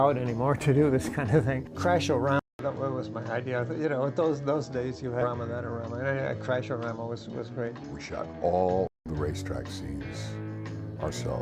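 At 2.39 s the input was likely switched to a poorer device. After a 200 ms silence the audio loses everything above 7.8 kHz and turns duller, with new background noise roughly 40 dB below the signal and the level about the same. This lasts until 9.06 s.

At 5.21 s a skip ahead occurs. Roughly 0.4 s of audio was discarded while later material was already waiting, and playback jumps straight across the cut with no gap and no fill, joining the two sides almost directly.

From 7.11 to 7.69 s the jitter buffer speeds up playback. It removes short pitch-period pieces, roughly 40 ms in total, so the audio runs at 105% speed at unchanged pitch. From 8.09 to 8.89 s it trims roughly 100 ms more at 111%, which sounds noticeably hurried.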